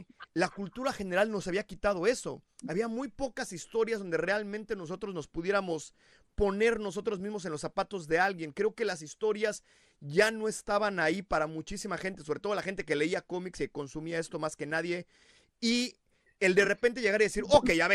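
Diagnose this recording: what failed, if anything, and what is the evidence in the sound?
The codec stage is at fault throughout the speech: the sound is dull and muffled, with a gurgling, granular roughness and flickering upper frequencies. This is likely MP2 compression at a low bitrate, consistent with about 80 kbps, where Layer II starves its sub-bands of bits and mutes the top ones.

At 12.13 s, between "estaban ahí para muchísima" and "sobre todo la gente", there is a brief burst of burbling, the DAB burbling of a weak reception path. Residual bit errors, on the order of 0.2 percent, corrupted samples, putting short blips of noise into single sub-bands.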